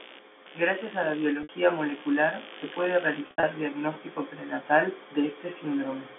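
Speech carried over a G.711 telephone-band line, its sound confined to roughly 300 Hz to 3.5 kHz, with two faults. Computer activity noise runs from the start to 3.78 s: a scratchy buzz pulsing at around 70 Hz, roughly 20 dB below the speech, caused by processor or peripheral load disturbing the audio ground. Unlike steady mains hum, it flickers with machine activity and ignores the speech. Packet loss with pitch repetition occurs at 1.43 to 1.49 s, a 60 ms gap, and from 3.27 to 3.43 s, where 130 ms went missing in runs up to 70 ms. The receiver repeated the last pitch period, which fits 10 ms packets. It sounds like a held, buzzy tone, and the longer runs fade into silence before the speech returns with a short cross-fade.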